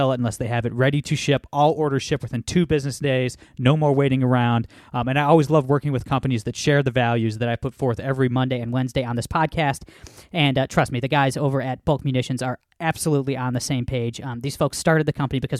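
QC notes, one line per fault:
8.36–15.6 s, wrong sample rate: from 8.36 s to the end the speech turns brighter and more rushed, with voices about 1.5 semitones higher and delivery roughly 9% faster (1.09 times speed). Pitch and tempo shift together by the same ratio, which means the samples are being played back faster than they were captured, with no rate conversion. That ratio fits 44.1 kHz material played out at 48 kHz.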